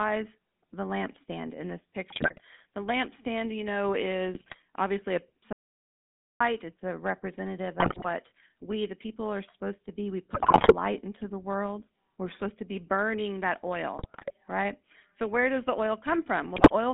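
Throughout, the GSM full-rate codec leaves the speech buzzy and gravelly, with nothing above 3.6 kHz, which fits a 13 kbps GSM stream. A spectrogram shows a flat ceiling there. GSM bit errors at 2.1 to 2.41 s (after "the lampstand in this") and at 4.34 to 4.56 s corrupt the decoder's parameters, causing squawks and gargling that appear as smeared, level-jumping frames. A dropout to silence from 5.53 to 6.40 s, after "obviously a", removes 0.88 s of audio. The waveform shows a dead-flat line, likely from lost input. Further bit errors follow at 7.8 to 8.06 s, 10.34 to 10.75 s (before "into the world"), 13.97 to 14.32 s, and 16.56 to 16.71 s.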